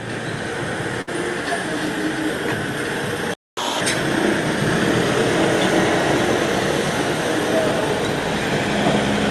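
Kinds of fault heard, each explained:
Burst of packet loss: From 1.01 to 1.09 s a run of packets never arrived in time. The receiver stretched the last sound for about 58 ms while letting it fade, then rejoined the stream later, so roughly 60 ms of the original sound is simply gone.
Playback stall: At 3.34 s the output drops to silence for 234 ms before resuming at 3.57 s. The sound cuts off abruptly mid-flow, which most likely means the player ran dry of buffered data or its audio thread was held up.
Catch-up at higher speed: From 3.57 to 3.81 s the player resamples its backlog at 2.0 times normal rate to recover the time lost in the stall. Speed and pitch jump together, pitch rising by around ten semitones, then return to normal.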